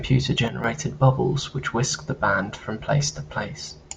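A gain setting likely switched instantly rather than ramping, producing a sudden gain jump between 0.48 and 0.64 s in this speech. The level steps down by about 7 dB from one sample to the next and stays there for that stretch, so the voice and the background noise drop together rather than the talker simply getting quieter. The lowered section ends just before "bubbles which whisked the".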